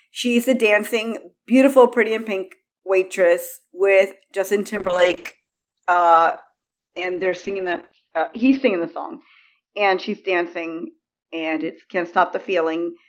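From 4.77 s to the end, a call bitrate drop cuts the encoder from 40 to 8 kbps, sitting lowest for 3.83 s. The top is clipped from 20 kHz to 6 kHz, so speech turns muffled and rough.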